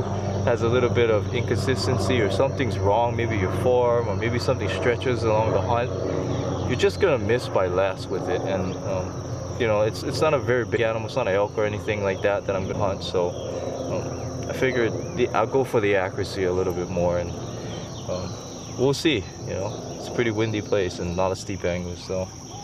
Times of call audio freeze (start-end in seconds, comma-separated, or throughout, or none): none